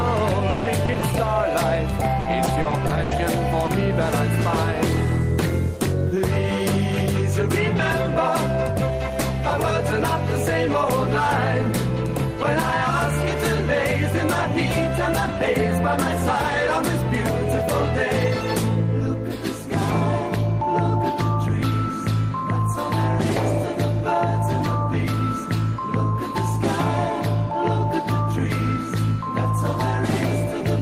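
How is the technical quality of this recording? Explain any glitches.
The recording has packet-loss damage in its first four seconds. From 0.49 to 1.27 s and again from 2.07 to 3.19 s, the sound turns choppy with pieces missing. This is repeated packet loss: gaps of up to 160 ms were patched by stretching the preceding sound. At 3.65 to 3.69 s there is a brief smear, a short concealed packet loss in which a 20 ms hole was filled by continuing the last sound.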